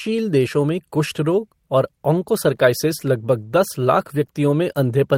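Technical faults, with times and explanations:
Nothing technical stands out in this speech recording; there's nothing here worth flagging.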